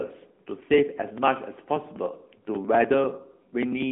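A speech recording that has passed through an AMR narrowband mobile codec for its whole length. The audio is confined to a telephone band of roughly 200 Hz to 3.5 kHz, with nothing above 3.8 kHz, so it sounds thin and boxed-in. The codec damage is plainly audible: the vocal-tract model and sparse pulse excitation give the speech a buzzy, synthetic edge. That degree of coarseness fits a mid-range AMR-NB mode of around 10 kbps rather than its top rate. Periodic USB or driver dropouts are also present, running from 0.1 s to 3.82 s at a steady 0.098 s interval, about forty in all. Each one skips roughly 2 ms of audio outright instead of filling the gap with silence, so the waveform jumps at every loss. The result is a regular train of ticks, about ten per second, riding on the speech. The even spacing points to a background task stalling the USB bus or audio driver at a fixed rate.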